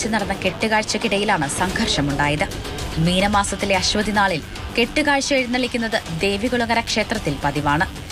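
Mains buzz runs throughout the clip, riding roughly 20 dB below the sound itself. Sharp switching spikes from the 50 Hz supply leak in twice per cycle, spraying harmonics up into the kilohertz range, so the hum comes across as a steady, raspy buzz.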